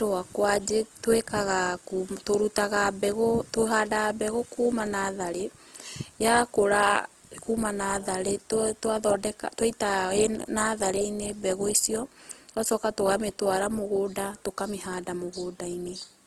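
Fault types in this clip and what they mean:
Opus compression: likely an Opus encode in music mode short of bits, filling bands with noise, so the speech sounds grainy and rough and stops at 12.4 kHz.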